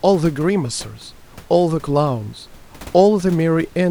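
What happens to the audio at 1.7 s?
Nothing goes wrong at 1.7 s; the speech carries on intact, with only the room's own background noise sitting about 26 dB beneath it.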